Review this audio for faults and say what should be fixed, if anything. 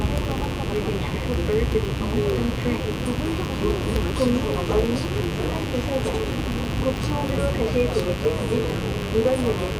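A mains buzz runs through the whole clip, built on 50 Hz and sitting about 15 dB below the wanted sound. Sharp switching spikes, twice per mains cycle, push harmonics up into the kilohertz range. That is why it rasps, unlike a smooth low hum. Shielding the cables and keeping dimmers and rectifier supplies off the recording circuit would prevent it.

Periodic USB or driver dropouts tick through the audio from 0.06 s to 9.72 s, one every 0.064 s, around 150 in all. Each time, a background task stalls the USB bus or driver and roughly 0.1 ms is replaced by silence. Random crackle is irregular, but these ticks are evenly spaced and sound only while there is signal. Disabling the interfering background process or enlarging the audio buffer would prevent them.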